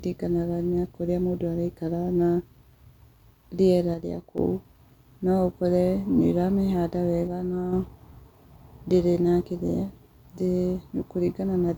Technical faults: one channel drops out

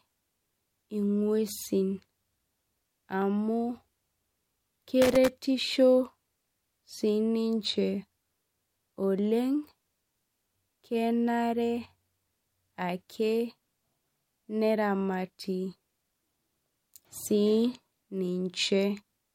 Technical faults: loose connector crackle

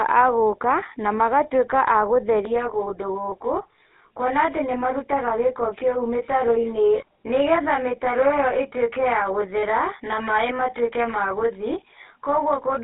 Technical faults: GSM full-rate codec; channel delay (comb filtering); lost GSM frames

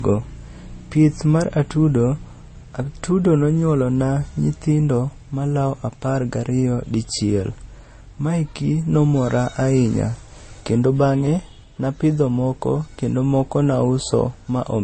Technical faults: transcoding between lossy codecs

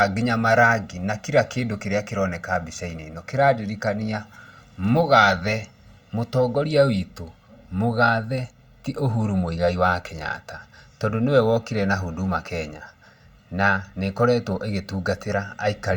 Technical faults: channel delay (comb filtering)

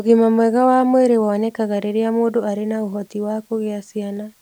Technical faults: low bit depth with dither

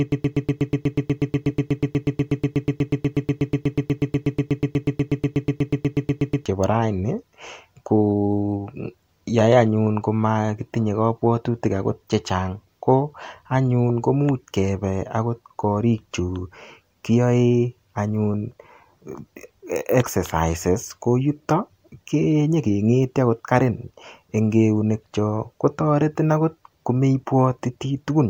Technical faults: broken-record loop

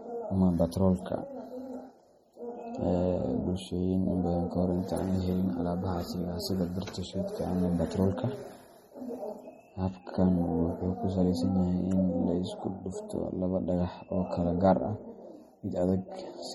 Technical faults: MP3 compression

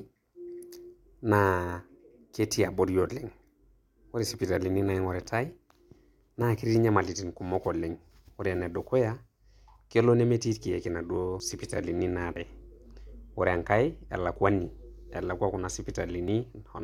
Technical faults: dropped buffer (overrun)

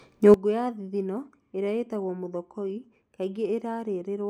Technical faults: sudden gain jump

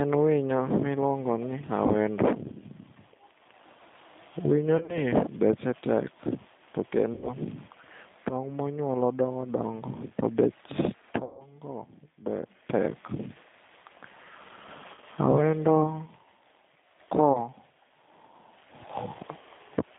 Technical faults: G.729 codec; VoIP packet loss concealed by the speech codec

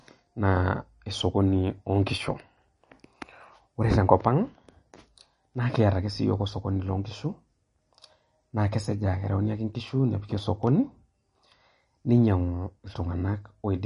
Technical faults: MP3 compression

